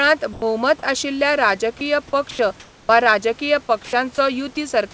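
At 0.33 to 0.42 s, 1.79 to 1.81 s, 2.31 to 2.39 s and 3.85 to 3.93 s, the speech briefly gives way to flat, steady hiss. This is sound dropped by the voice detector, which likely judged the speech to be background and stopped sending, so the receiver filled in with comfort noise.

From 2.60 to 2.89 s, the room background turns smooth and featureless and about 1 dB quieter. This is comfort noise in place of the background, likely synthetic noise generated during a pause in transmission.

At 2.87 to 2.89 s, the speech resumes abruptly, missing about 20 ms of its soft start. This is an onset clipped by the voice detector, which was likely slow to notice that sound had begun again.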